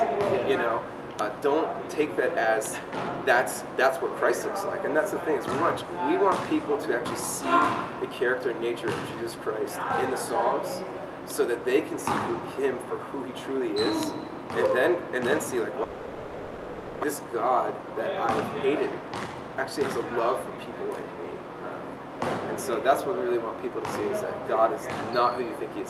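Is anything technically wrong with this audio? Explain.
Yes, there are two problems.

From 15.83 to 17.05 s the audio cuts out and the last sound is stretched into a fading buzz for about 1.2 s, never quite going silent. When it returns, roughly a second is simply gone. That's likely a long network dropout, with the receiver filling the gap.

Right after, from 18.94 to 21.03 s, there's a jitter buffer speed-up. The dropout shifted the delay by about a fifth of a second. Here the buffer was holding more audio than it aims for, so the receiver trims tiny pitch-period-sized slices, around 150 ms in total. It plays about 7% fast, slightly rushed, but the pitch stays put.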